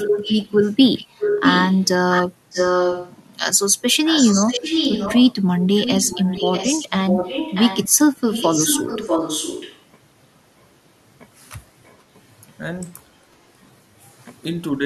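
Speech with a clear echo leak: a copy of the talker comes back about 641 ms late, roughly as loud as the original from 0.0 to 3.17 s and a bit quieter from 4.05 to 9.84 s, then just faint traces at 10.59–10.65 and 11.85–11.98 s. Likely the far end's echo canceller isn't fully removing its loudspeaker pickup. Right at the end, 14.78–14.83 s, there's a brief speech suppressed in double talk moment, where the voice dips by around 5 dB for about 50 ms, likely the canceller ducking the talker while both sides overlap.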